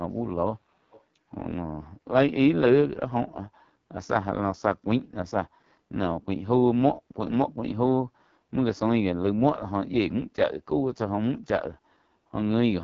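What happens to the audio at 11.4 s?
At 11.4 s the speech carries the same AMR wideband (HD Voice) codec damage heard through the whole clip, not a separate event. The heavy roughness and raspy, buzzy texture fit the codec's lowest rate, around 6.6 kbit/s. At that rate the pulse-driven vocal tract model captures too little detail below 6.4 kHz, and the band above is filled with shaped noise. A spectrogram shows smeared, coarse harmonics and a hard ceiling at 7.5 kHz with nothing above it.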